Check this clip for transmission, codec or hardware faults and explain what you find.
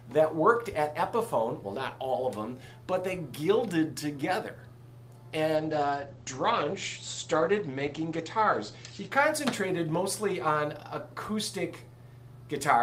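One codec fault is present: a call bitrate drop from 5.58 to 9.17 s. The audio turns coarse and watery, and its top end narrows from about 20 kHz to 8 kHz. That fits the encoder being pushed from around 48 kbps down to roughly 13 kbps after the call's bandwidth estimate fell, with the worst stretch lasting about 2.7 s. Unlike a fixed low-pass filter, the dullness comes with coding roughness, and quality recovers once the bitrate climbs again.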